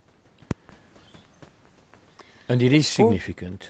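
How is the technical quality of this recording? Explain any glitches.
No glitches to report: the speech carries a call-path character with nothing above 8 kHz, consistent with a wideband call codec, and no faults are audible.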